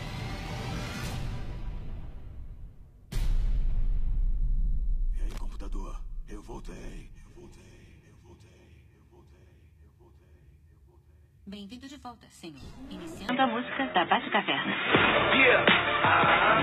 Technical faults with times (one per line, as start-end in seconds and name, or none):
5.30-5.39 loose connector crackle
13.29-16.63 input switched to a poorer device